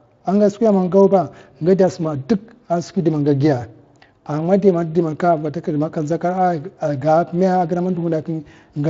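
No technical faults can be heard in this speech recording, which has passed through the Speex codec at a setting that leaves only light coding traces on the signal.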